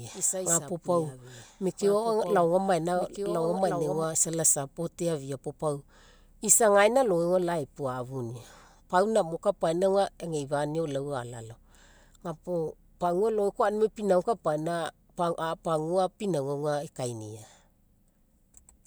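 From the very start until 4.04 s, a quieter copy of the speech trails the original by about a second and a half, roughly 10 dB down, dry and full-band, cutting off abruptly just after "isa isapu". This doubled audio track likely comes from a second, slower capture path mixed in.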